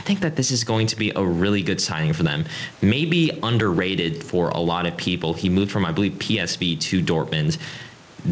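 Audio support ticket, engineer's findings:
Gain pumping, throughout: background swells in pauses, ducks around 10 dB under loud syllables. Likely excess input gain driving a fast limiter. Waveform shows flattened peaks; spectrogram shows the noise floor breathing.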